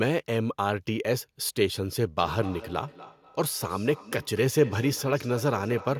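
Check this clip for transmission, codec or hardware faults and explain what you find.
One fault is present: feedback echo between two devices. From 2.19 s to the end, each word returns about every 200 ms, at about 16 dB below the speech. A second device in the room replays this microphone's sound, and the microphone picks it up again. Each echo canceller removes only its own device's playback, so the repeat survives. It sounds like a faint, regular shadow trailing each word.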